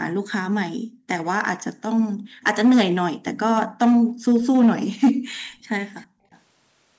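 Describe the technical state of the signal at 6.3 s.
Background gated by the echo canceller runs from 6.07 to 6.26 s. The room sound drops away sharply, by up to about 40 dB, for roughly a fifth of a second. The canceller clamped the microphone while the loudspeaker played, then released it.

From 6.31 to 6.39 s a faint, delayed copy of the speech is heard, about 35 dB below the main level and trailing by 333 ms. This is likely an echo leak. The far side's echo canceller missed some loudspeaker sound, which was sent back.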